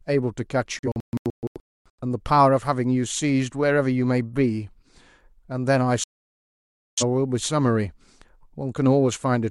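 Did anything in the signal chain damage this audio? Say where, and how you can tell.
Yes. A digital broadcast dropout at the reception stage twice mutes the speech. From 0.79 to 2.03 s it breaks into several short holes, the longest 256 ms, and from 6.04 to 7.03 s it goes silent. The receiver discarded corrupted frames, so waveform and spectrogram show flat, full-band blank gaps.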